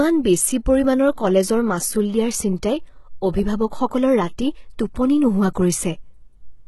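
From start to finish the speech carries heavy HE-AAC compression damage. The lower spectrum is coded directly. The treble is rebuilt from copies of it. Its harmonics do not line up with those below, so s sounds come out gritty and lispy, with a metallic edge. Nothing reaches past about 11.8 kHz. The damage fits a low bitrate of around 16 kbps. Spectral band replication in an HE-AAC encoder is the likely cause.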